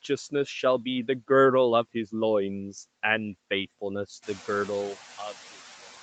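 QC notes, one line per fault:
Throughout: noise suppressor artifacts. Between words, the steady background noise drops by about 5 dB. Under speech it swells back up. The suppressor decides frame by frame which frequency bands hold only noise and turns those down. Bands carrying speech stay open, so the noise floor pumps along with the talking. The pumping is clearer once the room noise climbs by about 13 dB around 4 s, though it stays about 20 dB below the speech.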